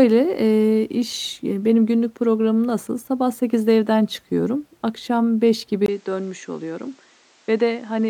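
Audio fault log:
5.86 s to end: input switched to a poorer device. After a 20 ms gap, the speech turns duller with nothing above 8.8 kHz, drops by about 5 dB and gains a new noise floor about 30 dB down, likely from a change to a lower-grade microphone or headset.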